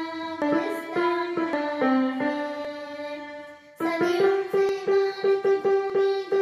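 The audio jumps ahead at 0.42, 1.53, 2.65, 4.69 and 5.90 s. The first three skips lose about a tenth of a second each and the last two about half that. That's likely a dropped buffer (overrun), with the segments spliced straight together and no gap.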